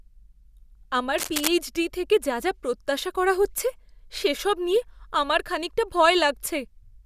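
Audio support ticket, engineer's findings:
Scratchy, rustling burst over the speech, 1.17 to 1.48 s, loud, only a few dB under the voice. Cable scratch noise. Likely a worn cable or connector being moved: contact resistance jumping rapidly, injecting dense, uneven noise bursts. Check and reseat cabling.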